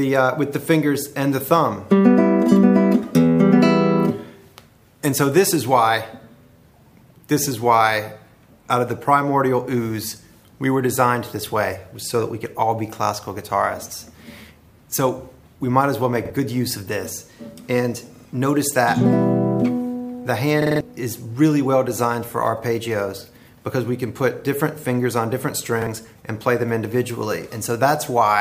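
Four repeated-buffer stutters: at 16.25 s and 25.82 s one chunk of about 46 ms plays twice, at 18.16 s three times, and at 20.62 s five times, each with a hard join. New audio arrived late, pointing to a 2048-sample buffer.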